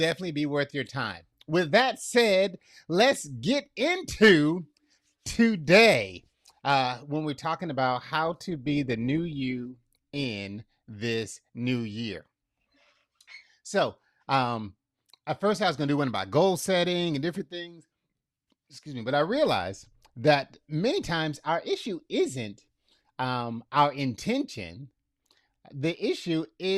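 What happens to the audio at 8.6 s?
The adaptive stream switched to a lower bitrate from 8.25 s to 10.25 s, consistent with a drop from roughly 64 to 24 kbit/s as the connection slowed. The speech's quality changes abruptly as codec artefacts rise, with no gap at either switch.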